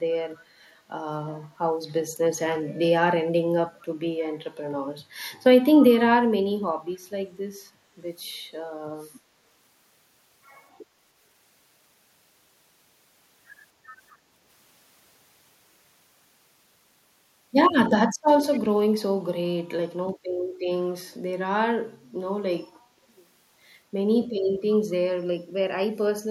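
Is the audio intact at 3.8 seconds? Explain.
No. From 3.80 to 3.86 s a faint delayed copy of the speech appears, about 30 dB below it and trailing by 251 ms. This is an echo leak, likely from a loudspeaker-side echo canceller passing residual pickup back into the call.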